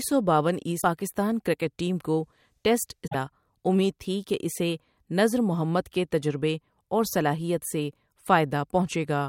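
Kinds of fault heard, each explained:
Damaged data in a compressed stream: two corrupted patches where the decoder misreads frames and has to resync. You get short glitches at 0.78 s, about 60 ms right after "سو باون", and at 3.04 s, about 110 ms after "کرکٹ ٹیم کو ٹیسٹ".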